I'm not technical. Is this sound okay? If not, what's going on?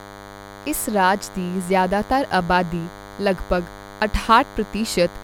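No. A DECT cordless phone or its base station was sitting close to the recording equipment, and this DECT cordless phone buzz runs from start to finish. The phone's radio fires a short burst a hundred times a second, and the audio circuitry picked those bursts up and turned them into sound. The result is a thin, steady buzz at 100 Hz. It sits under the speech, quieter than the talking.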